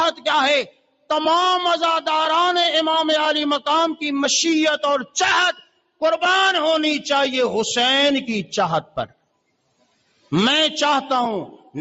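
A noise suppressor meant for speech stays active on this sound from start to finish. It treats sustained and ambient parts as noise and pulls them down. The level keeps shifting by around 5 dB. Attacks pass, but held tones and tails sag, so the sound pumps and thins. The top end stops near 8 kHz, which fits a wideband Opus call path.

Three sections are cut by the noise suppressor. The first runs from 0.65 to 1.1 s. The second runs from 5.53 to 6.01 s. The third, and longest, runs from 8.83 to 10.32 s, about a second of damage in total. In each, the suppressor judged the sound to be noise and pushed it down, by as much as about 19 dB. Steady and decaying parts drop away or end early. Sharp onsets stay.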